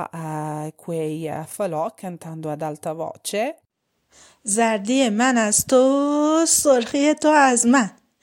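Nothing goes wrong anywhere in this bit of speech, so there's no fault here to point out.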